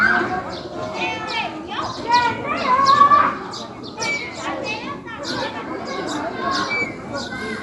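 From start to finish, the sounds carry plainly audible codec damage, likely from Dolby Digital compression. Nothing is present above 11.5 kHz, so the whole clip sounds dull and closed in. The damage points to a low bitrate, around 64 kbps. At that rate the encoder cuts the top of the band. It also leaves many frequency lines without detail. The decoder fills those gaps with noise. The result is a rough, fluttering grain around tonal parts of the sound.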